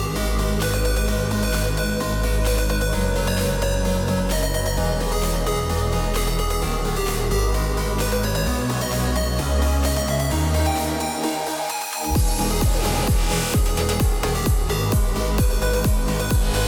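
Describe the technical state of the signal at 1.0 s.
The audio is intact at 1.0 s, with no audible fault at that moment.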